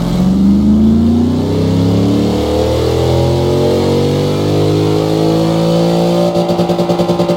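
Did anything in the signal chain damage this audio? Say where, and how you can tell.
Yes. The buffer between two independently clocked devices likely slips: their clocks disagree by roughly 150 ppm, so the buffer drifts until a handful of samples is dropped or repeated. These are clock drift buffer slips, heard as a click roughly every 1.08 s from 0.47 s to about 6.96 s, about seven in all. The steady spacing, rather than any link to the sound itself, points to the buffer stage.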